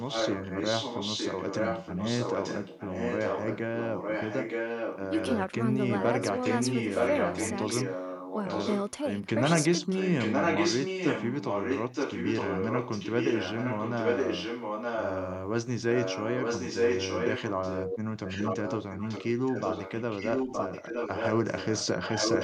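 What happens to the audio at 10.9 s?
At 10.9 s the speech is shadowed by an echo leak, which runs from 9.95 to 15.37 s. A copy of the speech returns 917 ms late at roughly the same loudness as the original. The likely cause is a loudspeaker at the far end whose echo canceller let its microphone pick-up pass back down the line. That near-second delay is what separates it from room reverberation or a short slapback, since the returned speech arrives as a separate repeat instead of blurring into a tail.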